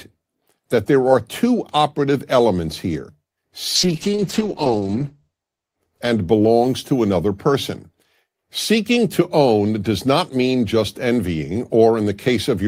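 From 3.77 to 6.85 s the speech turns rough and muffled, losing everything above 8 kHz, then clears just before "to another person". That is a call bitrate drop: the encoder was starved of bits, consistent with a fall from 32 to 9 kbps lasting 1.5 s at its lowest.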